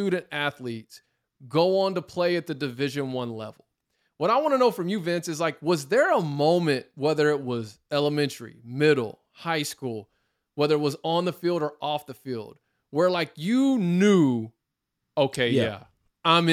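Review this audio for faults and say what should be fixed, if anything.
Nothing stood out as a fault on listening to this speech recording, so there is nothing here to fix.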